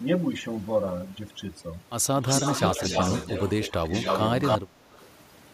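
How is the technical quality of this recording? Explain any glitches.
The recording has clear technical problems, with three kinds of fault heard in the speech.

Throughout, the background drops and breaks up into twinkling specks: overdone noise removal, stripping frequency bands near its noise estimate along with quiet speech detail.

At 2.21 to 2.27 s, 3.70 to 3.86 s and 4.58 to 4.91 s the voice dips, by roughly 10 dB in the first two and a much deeper 25 dB or so in the last. This is speech suppressed in double talk, likely an echo canceller turning everything down while both sides spoke.

A delayed copy of the voice trails about 0.28 s behind at 2.29 to 3.72 s (slightly quieter than the speech), 3.88 to 4.58 s (about as loud) and 4.94 to 5.06 s (very faint). This echo leak is likely loudspeaker sound that the canceller failed to remove.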